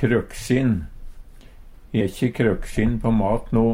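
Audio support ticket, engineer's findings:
Damaged data in a compressed stream at 2.00 s: brief glitch as the decoder misreads corrupt frames and resyncs; spectrogram shows a thin broadband vertical smear, waveform a short discontinuity.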